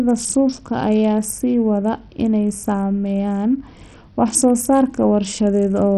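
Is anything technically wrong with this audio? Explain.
Yes, two problems are audible in this speech clip.

Bluetooth SBC compression, heard throughout, is the likely cause of heavy damage: a starved bit pool, fitting roughly 64 kbps, leaves treble flickering and gritty aliasing noise.

A dropped buffer (overrun) at 4.35 s causes a small skip, likely because roughly 20 ms was overwritten before being read.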